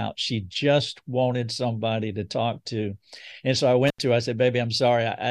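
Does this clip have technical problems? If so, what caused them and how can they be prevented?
Yes. An intermittent contact at 3.87–3.99 s: a loose connection opens for about 83 ms, dropping the speech with crackle at both edges. Reseat or replace the suspect cable and connectors before recording.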